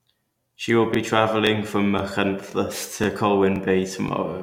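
Overlapping chunks produce a brief stutter in the speech at 0.42–0.44, 0.94–0.97, 1.47–1.49, 1.99–2.01, 2.51–2.54, 3.04–3.06, 3.56–3.58 and 4.08–4.11 s. The audio was handled in half-second chunks, each starting about 23 ms before the previous one ended, so that sliver plays twice at every join. Unlike a dropout, nothing goes missing; a tiny piece repeats. The strictly regular spacing, roughly every 0.52 s, sets it apart from random glitches.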